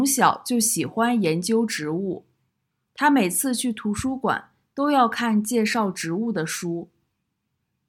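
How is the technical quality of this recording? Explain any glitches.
Nothing here sounds off: the speech comes across without any glitches or technical faults to point to.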